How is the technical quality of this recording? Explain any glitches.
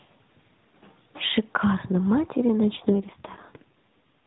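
The speech comes through a narrowband mobile codec, AMR-NB, so nothing above 4 kHz is present, and one glitch stands out.

AMR rate drop, 2.74 to 3.96 s: the codec switches to a lower mode so more bits go to error protection, which fits a step down from 12.2 to 5.9 kbps. The band stays the same and nothing cuts out, but the voice turns rougher and more synthetic until the rate recovers.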